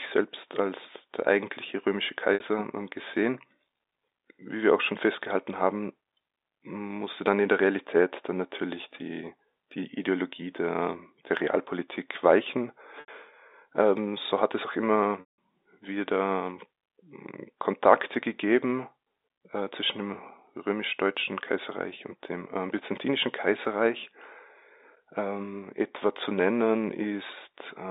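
Packet loss with pitch repetition occurs at 2.34 to 2.40 s, 13.00 to 13.08 s and 15.20 to 15.37 s. Each gap is bridged by looping the last pitch cycle. The 60 and 80 ms gaps sound like a brief buzzy hold. The 180 ms gap fades into silence before speech resumes.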